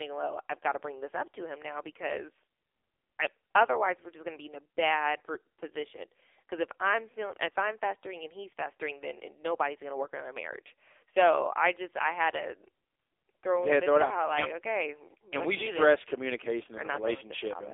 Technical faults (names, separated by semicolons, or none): AMR narrowband mobile codec